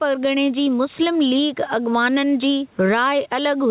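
Throughout, the gain swings by around 10 dB under loud syllables. This is gain pumping, likely excessive mic gain driving a fast limiter.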